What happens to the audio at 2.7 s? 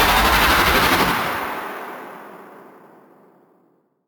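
At 2.7 s there's a bright, metallic fizz riding on the sound, about 14 dB below it and rising and falling with it. This is imaging from sample-and-hold upsampling, present throughout the clip: samples were repeated without smoothing, which fits 16 kHz audio raised to 44.1 kHz, leaving mirrored spectrum between 8 kHz and 16 kHz.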